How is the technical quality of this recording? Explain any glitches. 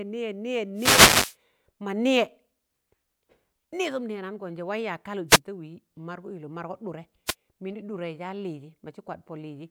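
Three wireless microphone noise hits break up this speech recording, at 0.75 to 1.36 s, 5.28 to 5.39 s and 7.26 to 7.35 s. Each is a dropout in the radio link of an analogue FM microphone: reflected signals cancel the direct one, the received level sinks, and receiver noise surges up over the voice. The first, lasting about 0.6 s, is a longer swish of static. The two later ones are quick bursts of around 0.1 s.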